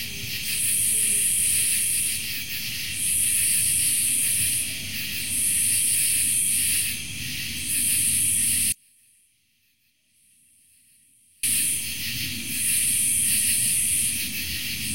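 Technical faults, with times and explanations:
8.72 to 11.43 s, audio dropout to a faint residue: the sound cuts off abruptly for 2.71 s, leaving faint sound about 35 dB down, likely the signal lost while the path stayed live. The waveform shrinks to a sliver, and the spectrogram fades to a pale band with sharp edges.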